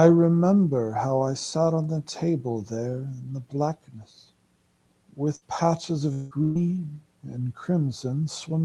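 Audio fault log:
5.35 to 5.44 s and 6.43 to 6.58 s, burst of packet loss: In each gap the receiver stretches the last sound it got, for about 60 ms and then about 120 ms, fading it out as a buzz or hiss before the audio resumes with that much of the speech skipped. On a spectrogram the harmonics or noise band continue flat and darkening, then break sharply. The waveform shows a repeating, shrinking pattern ending in a jump.
6.13 to 6.34 s, long network dropout: For about 180 ms the audio is replaced by a continued, fading copy of the preceding sound. It never falls to silence before speech returns with that stretch missing, which points to a brief network stall and likely a long dropout. On a spectrogram the last frame's pattern smears forward and dims, then stops abruptly. The waveform shows a periodic, decaying envelope ending in a discontinuity where the missing stretch was cut out.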